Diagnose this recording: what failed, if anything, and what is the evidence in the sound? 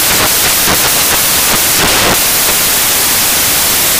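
The whole clip, start to finish, is loud broadband hiss where the content should be. That's samples built from the wrong bytes, a failure at the sample-format conversion stage. Whatever read the data grouped each sample's bytes wrongly, either shifted by one, in the wrong order, or at the wrong alignment, so the jittery low-order bits end up as the big part of each value. You get dense noise, close to white on the louder material.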